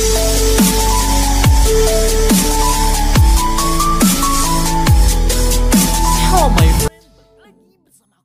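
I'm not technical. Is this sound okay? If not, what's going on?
No. From about 6.88 seconds to the end at 8.24 seconds, the likely culprit is one channel inverted: one of the two stereo sides has been flipped upside down, so it pushes where the other pulls. When the two sides are combined into one, as on a single speaker, they mostly cancel each other out. The sound abruptly drops to a faint trace of itself, nearly disappearing for those final moments.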